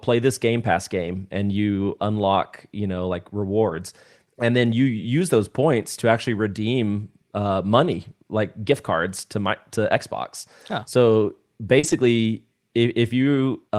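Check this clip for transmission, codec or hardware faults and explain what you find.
Packet loss on the receiving path causes two kinds of fault in this speech.

Lost packets rebuilt from error correction occur at 1.03 to 1.09 s, 3.69 to 3.75 s and 11.83 to 11.93 s. Packets failed to arrive, and the decoder replaced them with the lower-bitrate backup copy carried inside the following packet, so no gap opens. About 40 ms is rebuilt at each of the first two points, consistent with two lost packets, and about 60 ms at the third. These stretches sound briefly coarser and noisier than the surrounding audio.

Short concealed packet loss occurs at 11.79 to 11.85 s, running straight into the third rebuilt stretch. About 40 ms of audio never reached the decoder in time and had no backup copy to fall back on. The receiver therefore extended the preceding sound, carrying its pitch forward or substituting shaped noise, before crossfading into real audio. 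The result is a short smear or wobble, and a brief sound in that span may be lost.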